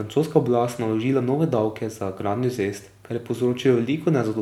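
No technical faults can be heard anywhere in the recording.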